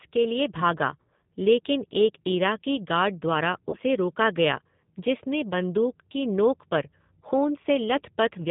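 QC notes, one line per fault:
throughout: G.729 codec at 8 kbit/s, damage plainly audible. The decoder rebuilds speech from a vocal tract filter, a pitch predictor and a few pulses per subframe, so nothing above 4 kHz survives and the speech sounds rough, slightly synthetic and narrowband.
3.70–3.77 s: VoIP packet loss concealed by the speech codec. About 30 ms of audio is missing, consistent with a single lost packet. The decoder extends its last pitch and filter state at falling gain, giving a brief buzzy or noisy smear, and the speech stays weakened for a short stretch after reception resumes.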